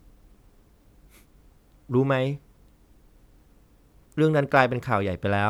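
Nothing in the speech stood out as a technical fault on listening.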